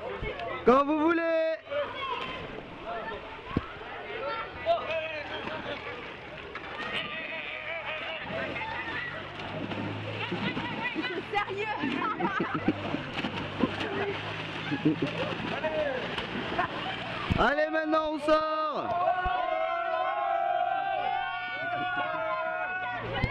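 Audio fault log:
Nothing stood out on listening to this audio.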